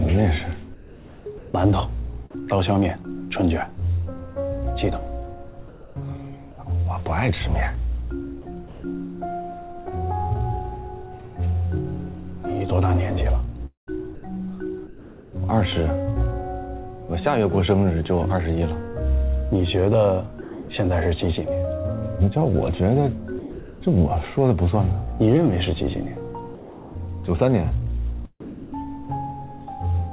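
From 0.74 to 2.42 s the background goes flat and featureless for about 0.7 s in total. This is comfort noise in place of the background, likely synthetic fill sent during discontinuous transmission while the sender's voice detector heard nothing. At 2.3 s a 30 ms fragment of sound vanishes into that steady hiss. This is sound dropped by the voice detector, which likely mistook it for background. From 5.68 to 5.96 s the real background, about 21 dB below the loudest passages, is again swapped for smooth comfort noise about 1 dB quieter, likely another transmission pause.

Between 8.42 and 8.84 s the sound turns choppy, with about 0.2 s replaced. This is sound chopped by the voice detector, likely toggling between sending and not sending. The same chopping returns from 13.66 to 14.23 s, with about 0.29 s replaced.

From 20.41 to 20.69 s about 0.24 s of sound gives way to steady noise, and again from 23.39 to 23.81 s about 0.24 s is lost inside a 0.42 s fill. 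Both are sound dropped by the voice detector, likely a misreading of quiet material as background. From 26.55 to 28.87 s the chopping returns over a longer stretch, with about 0.72 s replaced by comfort noise. Throughout, the call path passes nothing above 4 kHz, which fits a 64 kbps G.711 telephone codec.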